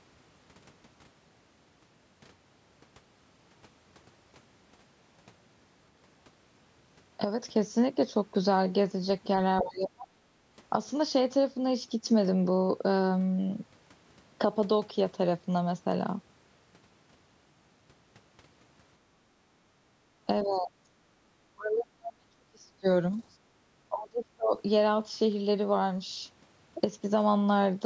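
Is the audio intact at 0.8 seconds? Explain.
Yes, the speech at 0.8 seconds is intact, with only the ordinary call microphone processing, which leaves nothing above 8 kHz, shaping the sound there.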